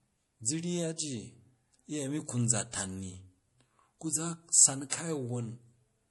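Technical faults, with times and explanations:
Throughout: low-bitrate audio saved at a high bitrate. The speech has nothing above about 11.4 kHz, which fits a first pass through MP3 at around 48 kbit/s, and the artefacts of that encoding remain even though the file now carries a much higher rate, likely a 192 kbit/s MP3 re-encode. The second pass cannot restore what was discarded. Unlike a plain low-bitrate file, the size promises quality the sound lacks.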